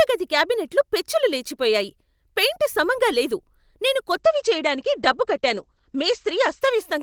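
Right after "పెయింట్ సమంగా లేదు నేను", at 4.08 s, there's a call bitrate drop running to the end. The sound goes rough and muffled, with the top cut off at 8 kHz instead of 20 kHz. That fits the encoder falling from roughly 32 to 12 kbps, bottoming out for about 2.2 s.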